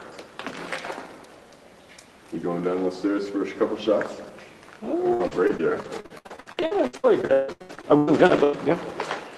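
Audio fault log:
5.13–8.55 s, repeated packet loss (robotic sound): about a third of the stretch is concealed, with gaps up to 151 ms patched by extending prior sound, giving choppy, robotic texture.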